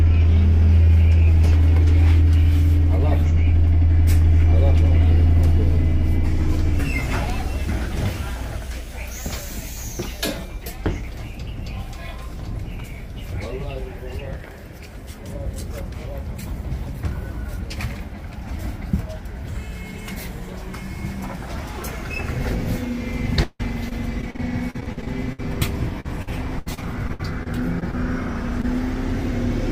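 From 23.43 to 25.40 s, the audio breaks up with repeated packet loss, giving a robotic sound. Data keeps arriving late or not at all. Each hole is patched by extending the last sound, and the next hole follows soon after. About a quarter of this stretch is patched sound. The longest hole is 158 ms. The result is choppy. A second burst runs from 26.00 to 27.95 s. It is milder, with about a sixth patched and no hole longer than 70 ms.

At 28.61 to 28.65 s comes one short concealed packet loss. A 20 ms piece never reached the decoder in time. The receiver bridged it by continuing the preceding sound and then blending back into the real audio. It is heard as a brief smear or wobble.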